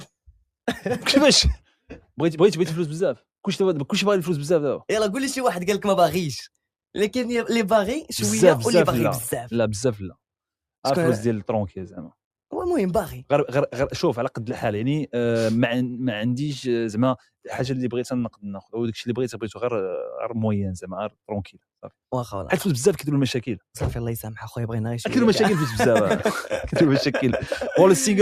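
Sound cut by the noise suppressor at 18.3 to 18.45 s: the suppressor mistook the sound for noise and pulled it down by about 21 dB for roughly 150 ms, leaving a brief dip.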